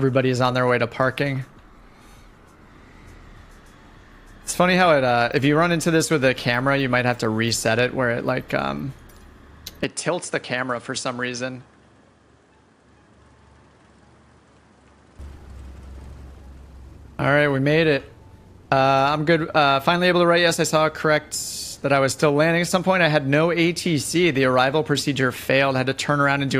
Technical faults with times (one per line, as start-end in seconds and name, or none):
9.84-15.19 input switched to a poorer device